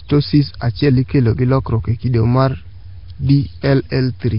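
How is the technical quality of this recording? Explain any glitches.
Poor, with heavy codec damage across the whole recording.

Throughout, the speech has a rough, hissy halo and a smeared, underwater quality, which points to Nellymoser compression, likely at around 22 kbps. The codec spends a fixed, small bit budget on each short block, so weak bands get nothing and are filled with noise. A spectrogram would show nothing above 5.3 kHz, grainy noise filling between the formants, and blurred, block-like time detail.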